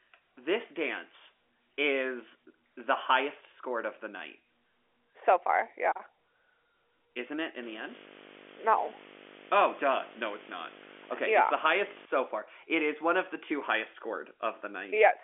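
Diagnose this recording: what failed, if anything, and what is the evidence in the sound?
Video or display buzz in the analogue wiring, 7.63 to 12.05 s after "it in": a 50 Hz field-rate buzz with hash and a 15.6 kHz line tone, roughly 10 dB below the speech.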